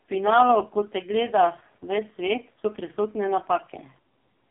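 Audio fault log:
throughout AMR narrowband mobile codec: nothing above 3.7 kHz, band about 150 Hz to 3.5 kHz, but unlike a plain telephone filter the speech turns heavily buzzy and synthetic, rebuilt from sparse pulses driving a vocal-tract model, which fits AMR-NB's lowest 4.75 kbps mode.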